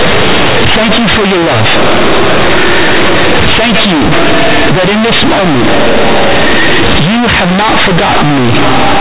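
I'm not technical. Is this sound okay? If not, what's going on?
No. The speech was stored as telephone-style mu-law audio but played back as plain linear samples, companded audio read as linear, so for all 9 seconds it sounds harsh, buzzy and far too loud, with heavy hiss in the pauses.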